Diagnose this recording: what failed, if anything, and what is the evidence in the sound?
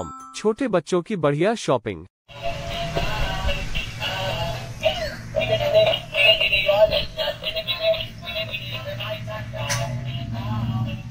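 Nothing failed in this recording.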